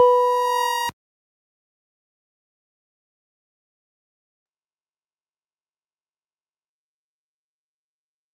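Gain pumping runs throughout, likely from input gain set far too high with a fast limiter pulling it down, so the gain swings by about 5 dB. From 4.47 s to the end, a call bitrate drop sets in, fitting a fall from about 96 to 8 kbps. The top end narrows from 20 kHz to 8 kHz, and the sound turns coarse and muffled, worst for about 2 s.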